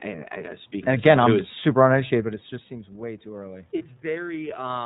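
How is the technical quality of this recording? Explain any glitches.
The recording has plainly audible narrowband coding throughout, a slow gain rise in the second half, and one brief dropout.

The iLBC codec is present across the whole clip. It codes each frame of speech independently, so the sound is rough and slightly synthetic. A spectrogram shows nothing above 4 kHz, as expected for a narrowband codec; here it runs in the 13.33 kbps mode with 30 ms frames.

Automatic gain rising runs from 2.23 to 4.8 s, just after "I'm is super uneducated". The talker drifted about 13 dB quieter near 2.0 s. The gain control then lifted the level by about 3 dB, swelling the voice and room noise together. On the waveform the envelope grows gradually.

Lost iLBC frames appear from 3.78 to 3.82 s. The decoder filled the gap by repeating the last pitch cycle mixed with noise, giving a short buzzy hold. 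This is consistent with one 30 ms frame. A spectrogram shows a smeared, static patch, and the speech recovers immediately afterward.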